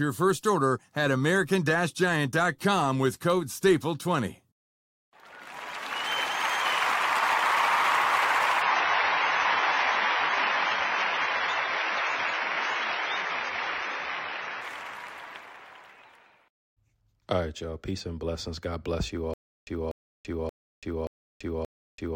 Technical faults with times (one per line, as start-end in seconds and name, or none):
8.62-14.62 adaptive stream at a lower bitrate
19.34-22.16 stutter with silent gaps